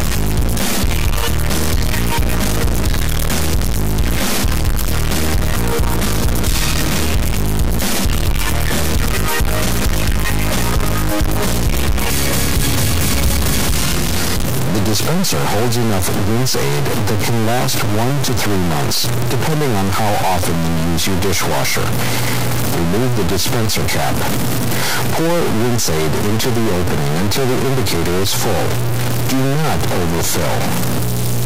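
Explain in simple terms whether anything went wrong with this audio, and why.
Something went wrong from start to finish. The sound has a harsh, buzzy distortion, and even the pauses are filled with loud noise. This points to a stuck bit, likely one fairly high data bit frozen at 0 or 1, which bends about half of the values.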